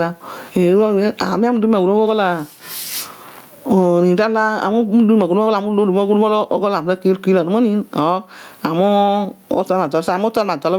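A speech clip with gain pumping throughout, likely from input gain set far too high and a fast limiter clamping down on every loud syllable. The level swings by around 25 dB, leaving a squashed sound.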